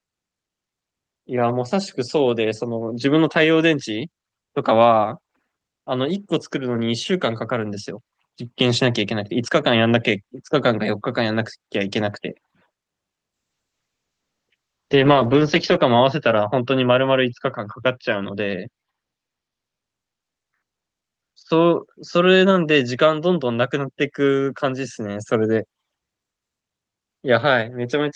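Speech heard through an Opus call path turns rough and muffled from 13.35 to 23.97 s. The top end narrows from 12 kHz to 8 kHz, and the worst stretch lasts 2.43 s. This is a call bitrate drop: the encoder coded more coarsely, which fits a fall from 32 to 8 kbps.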